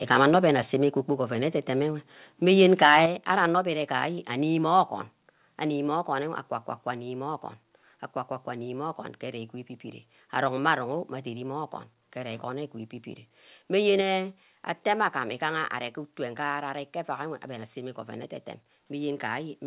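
From 0.11 to 0.37 s, and again from 2.6 to 3.04 s, the speech peaks are flattened, with a harsh, crackling edge on the loudest syllables. This is microphone overload, likely from input gain set too high, driving peaks about 7 dB and then about 9 dB past the converter's ceiling, with a small fraction of samples clipped.

Abrupt level drops follow at 1.02 s (about 3 dB), 3.06 s (about 6 dB, right after the second overload), 5.1 s (about 2 dB) and 14.01 s (about 3 dB). This is the microphone volume stepped down, likely by the call software's automatic gain control, and voice and background fall together at each step. Throughout, the G.711 A-law call path at 64 kbps carries nothing above 4 kHz.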